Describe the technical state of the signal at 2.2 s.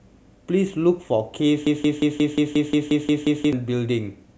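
At 2.2 s the signal is inside a broken-record loop running from 1.67 s to 3.53 s. A fragment of speech about 178 ms long plays back to back, repeated 10 times, giving a rapid, stuttering machine-gun effect with identical copies each time. The likely cause is the player or stream stalling and re-sending the last buffered piece, so the speech that belonged in those 1.9 seconds never arrives and is lost.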